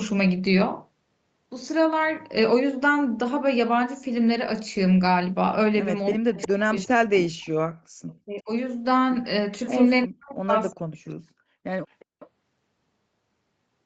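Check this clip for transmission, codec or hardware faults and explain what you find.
The clip has three kinds of echo-canceller fault, with far-end echo and near-end suppression colliding around 6 to 12 s. The speech band stops at 8 kHz.

Echo leak at 6.14–6.48, 7.41–7.49, 8.08–8.14 and 11.91–12.29 s: a copy of the speech arrives 362 ms late. It is strongest at first, about 10 dB below the speech, and later faint scraps. It is likely residual loudspeaker echo the canceller missed.

Speech suppressed in double talk at 6.15–7.31, 8.23–8.50 and 10.06–11.14 s: the speech sinks by up to roughly 40 dB in pieces. This is likely the canceller ducking everything during overlapping talk.

Background gated by the echo canceller at 7.74–7.95 s: the room sound drops by about 34 dB for roughly 200 ms, then returns as the canceller releases the microphone.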